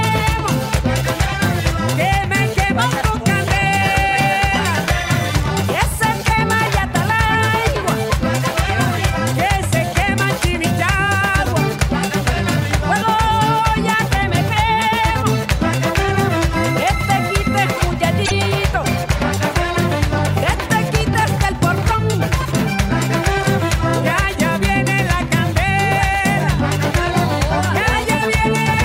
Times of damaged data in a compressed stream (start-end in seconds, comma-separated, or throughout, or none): 18.23-18.32